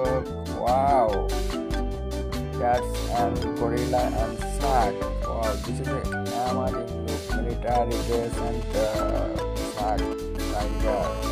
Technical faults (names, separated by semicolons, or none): GSM signalling bursts; GSM phone buzz